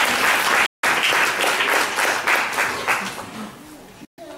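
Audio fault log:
0.66–0.85 s and 4.05–4.19 s, Bluetooth dropout. The sound drops abruptly to silence, then returns further along, as if it had kept playing. The likely cause is wireless packets that arrived too late and were discarded, losing about 168 ms and 126 ms of audio.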